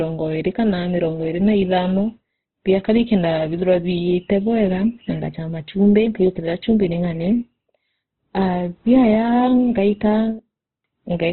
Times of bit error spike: none

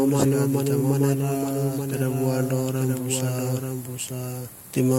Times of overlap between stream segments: none

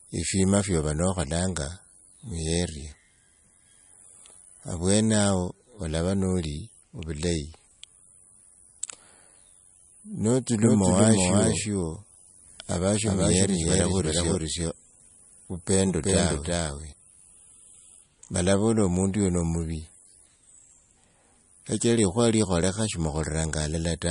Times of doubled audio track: 10.63-16.93

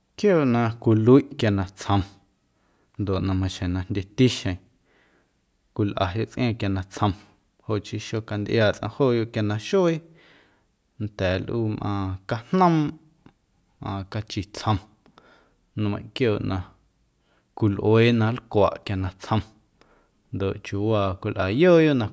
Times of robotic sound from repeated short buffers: none

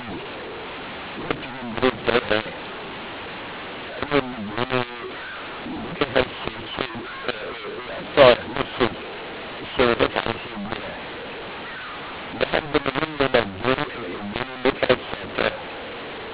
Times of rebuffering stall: none

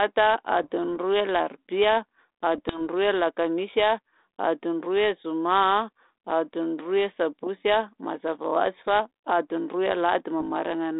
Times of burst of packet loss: none

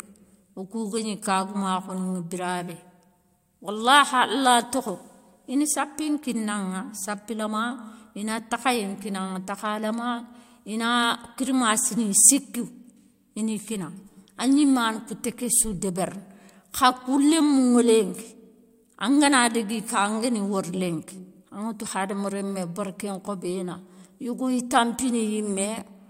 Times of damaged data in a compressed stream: none

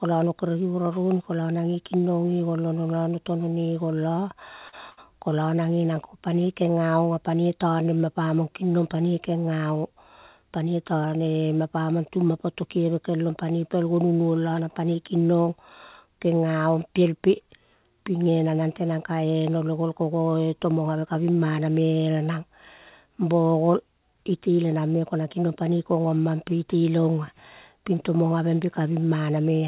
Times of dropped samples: none

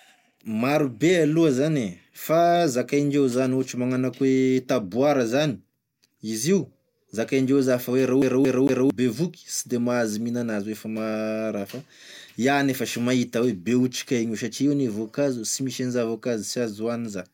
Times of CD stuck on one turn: 8.22-8.90

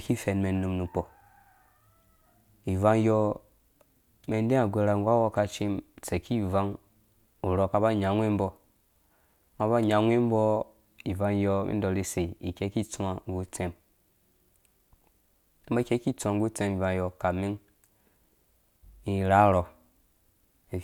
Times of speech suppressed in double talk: none

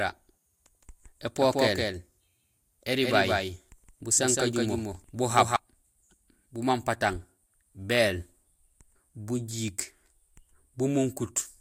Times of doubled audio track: 0.00-5.56

